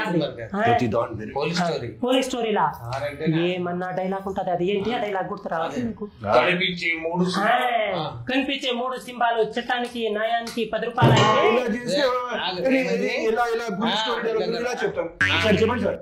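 Adaptive stream at a lower bitrate, 5.81 to 9.81 s: quality suddenly drops without a gap, nothing sounds above 14.9 kHz, and codec artefacts rise, pointing to a low-bitrate HE-AAC rendition.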